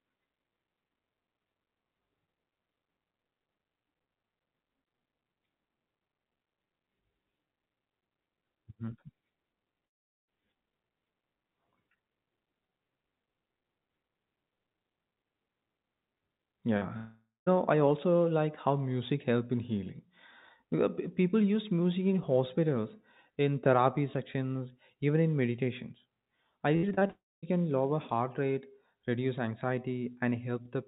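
From 9.86 to 10.29 s the sound cuts out for about 0.42 s, a likely long network dropout. The last sound is extended briefly, then fades to silence, and the audio resumes with that stretch missing.

At 16.77 to 16.83 s a short concealed packet loss patches a 40 ms hole with continued sound, leaving a brief smear.

Right after, from 16.97 to 17.48 s, half a second is lost, likely another long network dropout. A fading fill precedes about 0.17 s of silence.

At 19.11 s an underrun with held sample flattens the waveform for 1.7 ms, and playback then continues where it stopped, with only a faint tick.

From 26.77 to 27.11 s repeated packet loss (robotic sound) leaves five gaps, the longest 62 ms, concealing about 42% of the span. This makes the audio choppy, with pieces missing.

It runs straight into a third dropout, likely network-caused, lasting until 27.44 s, with about 0.22 s of silence. 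The call path's G.711 coding leaves nothing above 4 kHz throughout.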